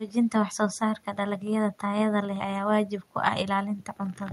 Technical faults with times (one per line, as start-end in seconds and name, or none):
none